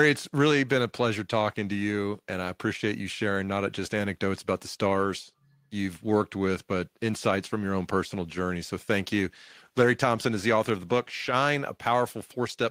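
Nothing in this speech recording stands out as a technical problem; it just runs along without any glitch worth pointing to.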